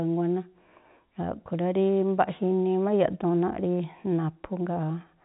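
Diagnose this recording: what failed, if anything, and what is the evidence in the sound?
Nothing in the recording has failed: the speech comes through the G.711 telephone coding path as that stage is designed to work, with the top of the band stopping around 4 kHz and no damage from any other stage of the chain.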